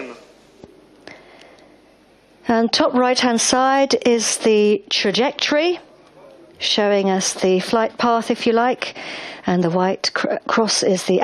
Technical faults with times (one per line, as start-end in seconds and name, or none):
none